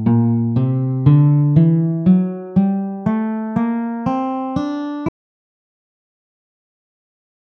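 An audio dropout to silence begins at 5.09 s and runs to the end, leaving silence with no room tone, likely from a lost input or disconnected device.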